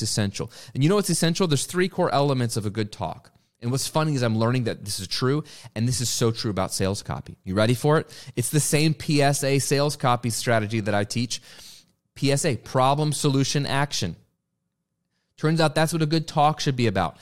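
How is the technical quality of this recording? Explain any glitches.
No glitches, dropouts or other technical faults can be heard anywhere in the speech recording.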